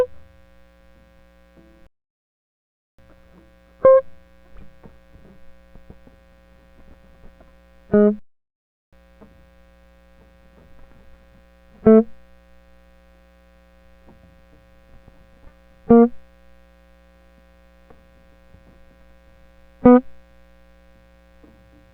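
The music cuts out at 1.87 s and stays silent for about 1.1 s before resuming at 2.99 s, then drops out again from 8.19 s to 8.93 s, about 0.73 s. These are playback stalls, likely the player starving for data or its thread blocking.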